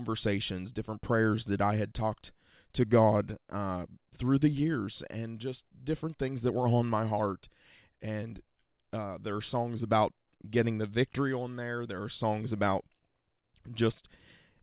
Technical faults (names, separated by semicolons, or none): none